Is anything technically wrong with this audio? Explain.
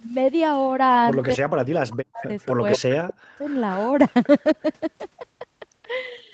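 Yes. The speech suffers two kinds of fault, both confined to roughly 1.35 to 3.43 s.

Speech suppressed in double talk occurs from 1.35 to 2.29 s and again from 2.77 to 3.43 s. The speech is pushed down by as much as about 40 dB for around a second in the first stretch and under half a second in the second. The likely cause is an echo canceller that, with both parties talking, could not separate the near voice from loudspeaker echo and attenuated both. A network dropout would cut off cleanly; this ducking tracks the other side's talking.

Echo leak appears from 2.24 to 2.53 s and from 2.71 to 3.14 s. It is a distinct repeat of the speech trailing by 230 ms, about 10 dB below the voice at first and then only about 5 dB below. This is likely loudspeaker pickup that the far end's canceller failed to remove. Room reverberation would be a smooth decaying tail rather than a discrete, delayed copy.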